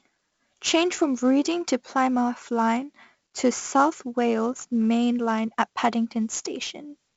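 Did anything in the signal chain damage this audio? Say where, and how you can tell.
Yes. 4-bit ADPCM compression at the codec stage damages the speech from start to finish. Gritty hiss rides on every loud syllable, sharp onsets distort where the adaptive step lags, and nothing is present above 7.7 kHz, which fits a 64 kbps stream at a low sample rate.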